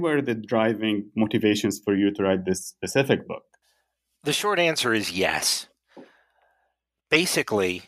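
Nothing technical to flag here, as the speech recording comes across without any audible faults at any point.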